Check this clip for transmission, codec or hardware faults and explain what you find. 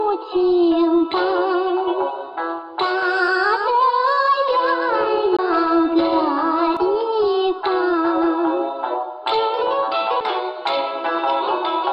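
Two kinds of fault are present: a doubled audio track and two CD skips.

From 3.03 to 6.77 s, a second, dry copy trails the sound by about 150 ms at roughly 5 dB lower, starting and stopping abruptly. This is likely a doubled audio track from a slower second capture path.

At 5.37 to 5.39 s and at 10.20 s, a tick and a brief mute, around 20 ms and a few milliseconds, precede a sudden jump in the audio. These are CD skips, where the laser jumped to another turn of the disc.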